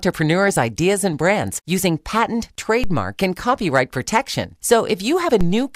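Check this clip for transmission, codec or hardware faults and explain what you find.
Two faults turn up, both of the same kind. At 2.84 s, between "and brands using patent" and "and copyright protection", and again at 5.41 s, a low thump sounds beneath the speech. Each is a DC step: the waveform's zero line suddenly jumps by about -11 dBFS and then drains away slowly through a roughly 2 Hz high-pass.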